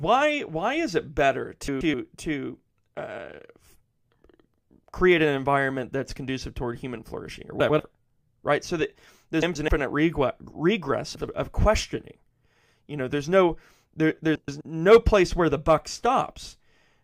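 Frames out of order occur at 1.68–1.94 s, 7.60–7.80 s, 9.42–9.69 s, 11.15–11.28 s and 14.35–14.61 s. Each time, two adjacent blocks of 64 to 128 ms are decoded swapped. The halves play exchanged, giving a brief garbled flutter. No time is lost.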